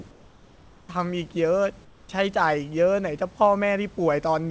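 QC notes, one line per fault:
0.11–0.89 s and 1.85–2.09 s, comfort noise in place of the background. In both pauses, the real room noise, about 29 dB below the loud parts, turns into a flat, featureless hiss. It drops by about 3 dB in the first gap and about 5 dB in the second. The room's detail returns when sound resumes. The likely cause is discontinuous transmission: the sender goes quiet and the receiver fills the pause with synthetic noise.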